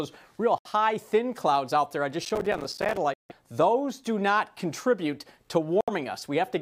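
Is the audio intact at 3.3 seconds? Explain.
No, a Bluetooth dropout silences it from 3.14 to 3.32 s, likely late packets being discarded; unlike an edit cut, the sound resumes further along, as if it had played on.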